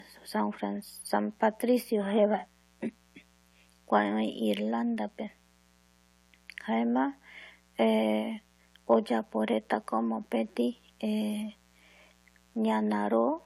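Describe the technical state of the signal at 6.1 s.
A switching spike on the 60 Hz mains is getting into the signal path twice per cycle, laying a steady, raspy mains buzz about 35 dB below the speech across the whole clip, including 6.1 s.

The audio was likely transcoded between lossy codecs, probably a low-rate AAC-LC pass then Vorbis, so stacked, mismatched artefacts persist throughout, with nothing above 16.5 kHz.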